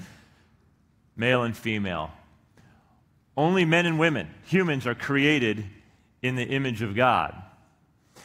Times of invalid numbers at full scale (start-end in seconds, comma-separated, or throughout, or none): none